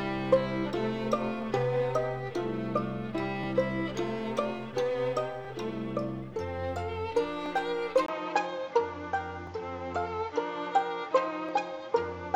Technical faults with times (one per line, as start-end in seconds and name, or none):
1.42 overlapping chunks
3.43 overlapping chunks
5.45 overlapping chunks
7.46 overlapping chunks
8.06-12.36 input switched to a poorer device
9.47 overlapping chunks
11.49 overlapping chunks